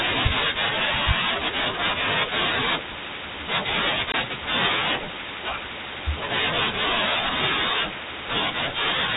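A speech recording carried over G.711 telephone coding, with its band capped at 4 kHz, has one instance of packet loss filled with silence from 4.12 to 4.14 s. The sound drops out completely for 20 ms, which fits a single lost packet at a typical 20 ms packet size. The receiver inserted silence instead of concealing the gap, so the signal is cut abruptly at both edges.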